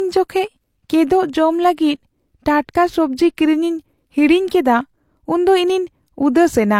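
Speech, and throughout there's nothing above 16.3 kHz plus smeary low-rate artefacts: likely low-bitrate audio saved at a high bitrate, something like HE-AAC re-encoded as generous MP3.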